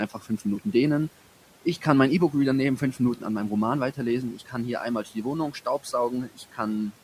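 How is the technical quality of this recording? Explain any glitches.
The recording has four brief spots where speech is cut by the noise suppressor, at 0.1 to 0.41 s, 4.34 to 4.54 s just before "hier einmal", 5.05 to 5.26 s just after "hier einmal", and 6.1 to 6.58 s. In each, the suppressor mistook a soft stretch of speech for noise and pulled it down about 8, 9, 9 and 12 dB respectively, affecting only around a tenth of a second or a little more each time. Consonants and endings sound swallowed and faint. Unlike a dropout, the sound never falls to silence. The room noise, sitting about 22 dB under the speech, dips along with the voice, which marks this as gain reduction rather than lost data.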